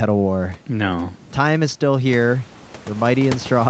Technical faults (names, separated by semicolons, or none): none